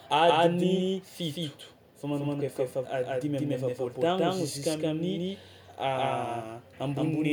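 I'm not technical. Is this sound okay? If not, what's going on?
No. Throughout the speech, every sound is heard twice: a second copy, just as loud, trails the first by roughly 0.15 seconds, giving a stuttering echo. This is a doubled audio track, likely from the same audio being recorded twice through a slower path.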